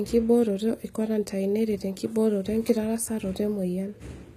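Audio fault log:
Throughout, HE-AAC compression: treble sounds gritty and lispy on s sounds, nothing above 14.9 kHz, likely from replicated upper bands at a low bitrate near 20 kbps.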